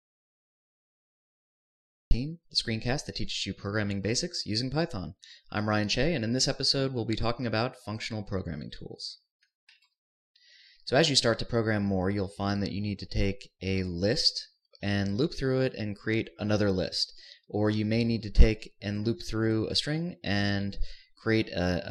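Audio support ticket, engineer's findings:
Audio dropout to silence, 0.00–2.11 s, under way from clip start. Silence with no room tone, then audio resumes mid-flow at 2.11 s. Likely input lost upstream (disconnect, link failure, mute) while recorder kept writing silence. No gate-style noise floor or fade.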